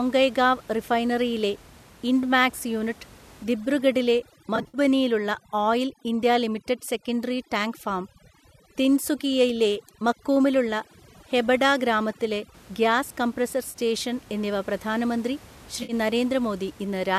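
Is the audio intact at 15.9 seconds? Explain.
No. From about 15.83 to 15.93 s there is AAC frame loss with concealment: roughly 60 ms of coded audio never reached the decoder, which fits about six of the short frames the likely low-delay AAC-ELD stream uses. The decoder padded the hole by reusing the last good spectrum with altered phase and energy, so the patch sounds smeared, noisy and phasey. Unlike a plain dropout, it never falls to true silence.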